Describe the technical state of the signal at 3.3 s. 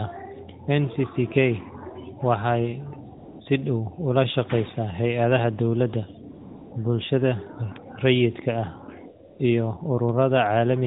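At 3.3 s the phone stopped sending speech frames from 3.18 to 3.40 s, and AMR comfort noise filled that 220 ms gap with smooth synthetic noise replacing the real background.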